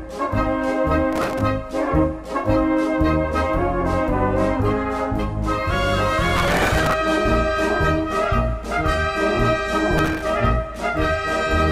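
Processor overload crackle at 1.13–1.41 s, 6.35–6.93 s and 9.98–10.22 s: short buffers of a few milliseconds missed deadlines and replayed old audio, causing gritty tearing bursts.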